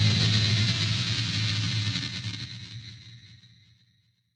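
Everyday sound, with channel delay (comb filtering) throughout: one channel lags by around 10 ms before mono summing, carving evenly spaced notches from near 50 Hz upward, leaving it hollow and phasey.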